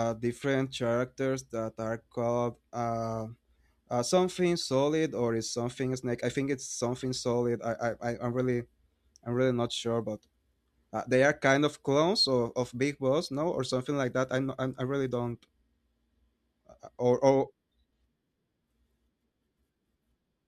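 Nothing in this speech recording stands out as a technical fault, so there's nothing to flag at any point along the way.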